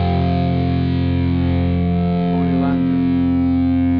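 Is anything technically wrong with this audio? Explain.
No, nothing technically wrong can be heard in this audio. No faults or defects turn up anywhere in it.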